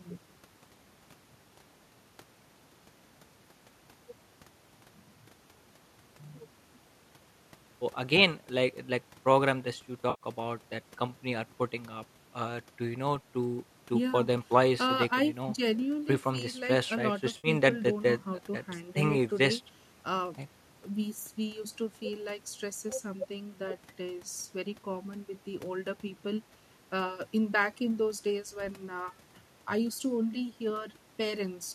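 At 10.10 to 10.24 s and again at 17.37 to 17.48 s there is AAC frame loss with concealment. About 100 ms and then 70 ms of audio went missing, and the decoder rebuilt each gap from the last good spectrum. Both patches sound briefly smeared and phasey, with a noisy blur instead of clean detail. The gap lengths fit the short frames of the likely low-delay AAC stream. On a spectrogram each gap shows as a smudged, stretched block. The waveform keeps its envelope there but loses fine structure.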